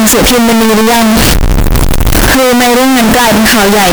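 From start to finish, the speech sounds extremely loud and harsh. The waveform is flattened into near-square blocks at an almost fixed, high level, the spectrogram is smeared bright, and background noise is as loud as speech. This is likely a float read as integer fault, with 32-bit float samples decoded as 32-bit integers. Pitch stays traceable.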